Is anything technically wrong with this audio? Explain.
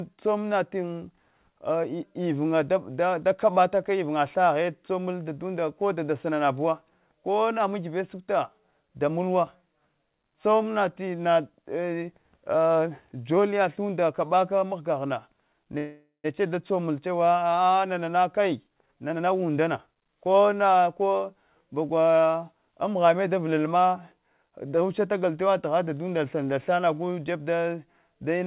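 Yes. From 15.78 to 16.26 s there is a call audio freeze, likely from packets held up in transit that emptied the jitter buffer. The receiver stretched the last sound into a fading buzz or hiss for about 0.46 s, ending in roughly 130 ms of silence. Unlike a dropout, nothing is lost: the audio resumes where it stopped, just later.

From 17.82 to 20.50 s comes a jitter buffer speed-up. The buffer had built up excess delay, so the receiver trimmed many short pitch-period slices, roughly half a second in total. The sound runs at 117% speed and feels hurried, but unlike a pitch shift it keeps the same pitch throughout.

The sound also stops at 4 kHz, which fits narrowband G.711 telephone coding.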